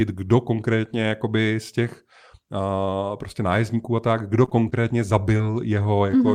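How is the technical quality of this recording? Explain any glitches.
The recording has three packet-delivery glitches near the end of the speech, all in the last two seconds.

Repeated packet loss (robotic sound), 4.45 to 4.85 s: four separate gaps, the longest 24 ms, left about 60 ms of speech missing. The receiver patched each by extending the preceding sound, about 79 ms in total, roughly a fifth of the span, so the passage turns choppy.

Short concealed packet loss, 5.37 to 5.41 s: about 20 ms of audio never arrived in time. The decoder covered the hole with 19 ms continued from the last sound and then blended back into the real signal, leaving a brief smear or wobble.

Short stall from a late packet, 6.11 to 6.15 s: a packet came in 21 ms late and the jitter buffer ran dry. The receiver held the last sound for 21 ms, then resumed from the same point. Nothing is lost, but one sound is slightly prolonged with a slight buzz or dip.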